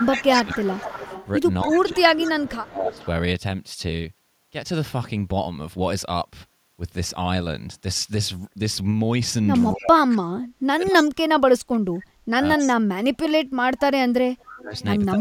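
From the start to 1.08 s the speech dips and thins in patches, about 0.7 s in all and up to about 15 dB down. Overlapping it, from 0.16 to 2.31 s, a faint copy of the speech trails 265 ms behind, about 15 dB below it. That is echo leak, likely a loudspeaker-side echo canceller letting part of its microphone pickup of the far voice back into the call.

From 1.64 to 3.01 s the same ducking returns, about 1 s of it and again around 15 dB deep. A brief echo scrap follows at 2.91 to 3.07 s, about 25 dB down. These drops are speech suppressed in double talk, likely the canceller turning everything down when both sides speak at once, unable to separate the local talker from the echo.

From 9.74 s to the end the suppression is heavier. About 4 s is affected and it falls as much as 40 dB, so the speech chops out in pieces. Short echo scraps at the same 265 ms delay poke through at 9.77 to 9.84 s (about 25 dB down), 12.58 to 12.71 s (about 15 dB down) and 14.76 to 14.83 s (about 30 dB down).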